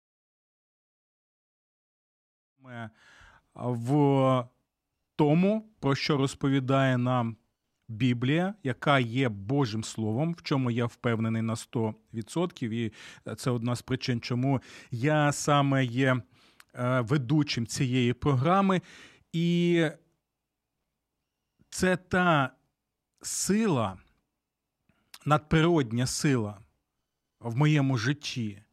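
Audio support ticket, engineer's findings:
No defects found on the speech; the fade-in from around 2.5 s to 3.32 s is smooth and intentional, with no click or hard edge.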